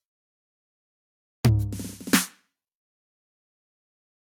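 No technical faults detected.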